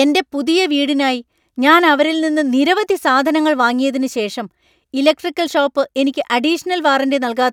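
No technical faults are audible.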